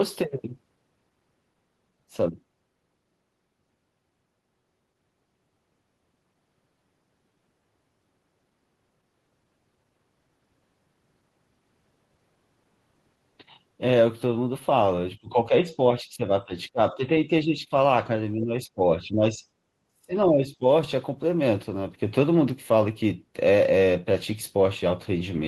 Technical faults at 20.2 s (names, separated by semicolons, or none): speech suppressed in double talk